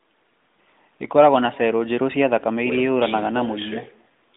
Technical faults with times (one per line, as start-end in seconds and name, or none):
0.00-4.36 echo with no canceller